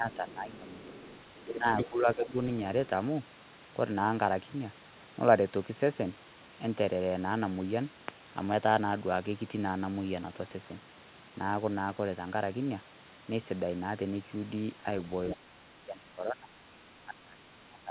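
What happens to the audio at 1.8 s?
The echo canceller most likely failed to strip the loudspeaker signal from the microphone, so from 1.78 to 1.88 s the other side's voice is leaking through. For that tenth of a second a second voice sits only a few decibels under the main speech, as if a fragment of the far end had been pasted over the talker.

Immediately afterwards the canceller appears to hit double talk and clamp down on everything. From 1.89 to 2.35 s the speech is suppressed in double talk, likely because the canceller could not separate the near talker from the echo and attenuated both. The talker's level sags by as much as about 10 dB, totalling roughly 0.4 s, so the voice sounds pushed back before it recovers.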